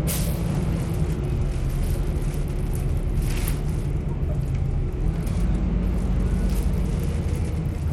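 Throughout the sound, treble flickers in and out over gritty, aliased noise, likely Bluetooth SBC compression at a small bit pool, around 96 kbps, rather than warbling perceptual-codec artefacts.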